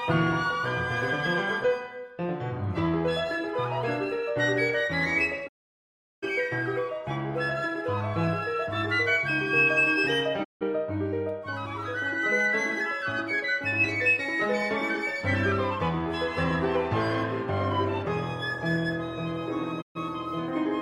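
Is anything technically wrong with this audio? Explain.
Yes. The audio has three digital broadcast dropouts: 5.47 to 6.24 s, 10.43 to 10.63 s, and 19.80 to 19.97 s. The receiver stopped getting usable frames and muted its output until good data returned. Each gap opens with a quick 20 ms fade to silence. The holes last about 740, 160 and 130 ms, which fits whole 32 ms frames being discarded. The sound then resumes later in the programme, and whatever fell inside each gap is gone.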